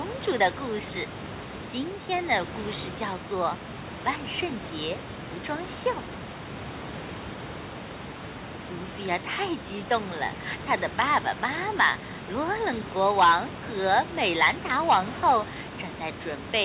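No faults in the speech; the room noise, at about 37 dB and about 14 dB below the speech, belongs to the recording, and the band stopping at 4 kHz fits a G.711 mu-law call path at 64 kbps working as designed.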